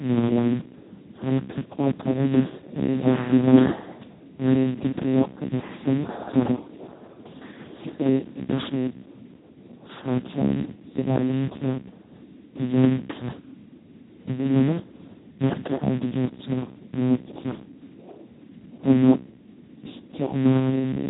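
Speex codec damage runs the full length of the speech. So few bits go to the excitation that the result is hoarse, noisy and robotic, which points to a bitrate near 2 kbps, and nothing remains above about 3.9 kHz.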